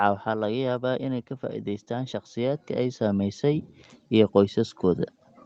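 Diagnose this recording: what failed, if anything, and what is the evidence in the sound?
In the call processing stage, automatic gain rising lifts the speech and background together by about 9 dB, swelling gradually from 1.87 s to 5.2 s.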